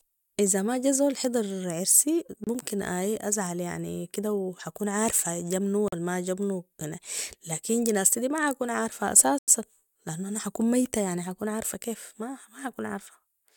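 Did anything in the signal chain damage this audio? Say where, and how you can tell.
Yes. Speech drops to silence three times: 2.44 to 2.47 s, 5.88 to 5.93 s, and 9.38 to 9.48 s, lasting 28, 43 and 94 ms. Each gap is clean. The likely cause is a Bluetooth stall in wireless playback. Delayed packets emptied the headphone buffer until retransmissions arrived.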